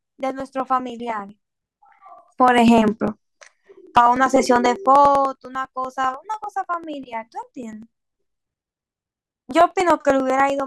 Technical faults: periodic USB or driver dropouts

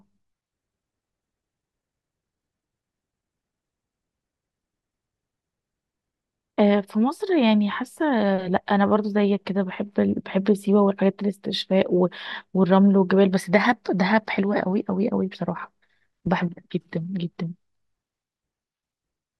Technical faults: none

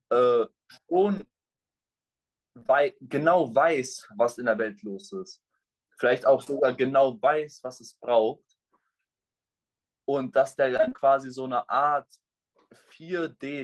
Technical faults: repeated packet loss (robotic sound); short concealed packet loss

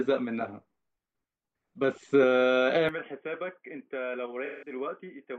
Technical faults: input switched to a poorer device; AAC frame loss with concealment

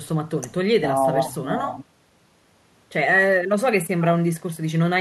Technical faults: none

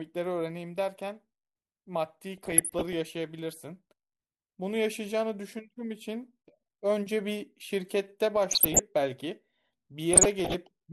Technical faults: DAB burbling

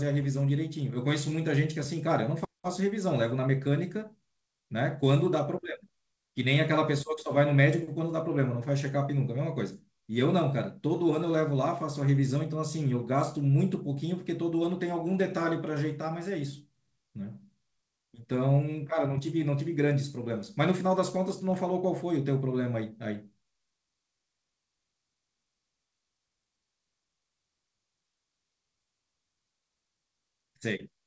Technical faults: none

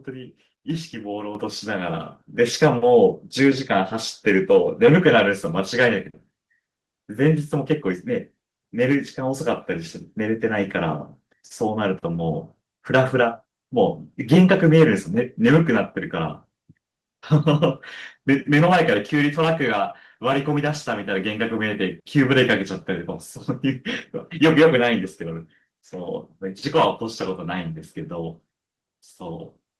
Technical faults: microphone volume stepped up

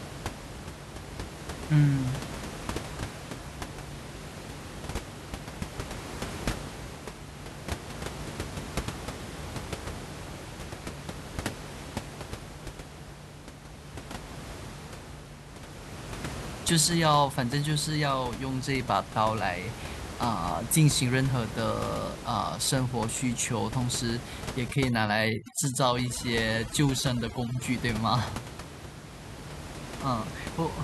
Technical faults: overdone noise removal

